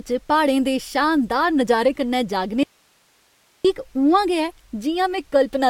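At 2.63 s, an audio dropout to a faint residue begins. The speech cuts off abruptly, leaving only hiss about 40 dB down until 3.65 s. The likely cause is a break in the signal while the path after it stayed live.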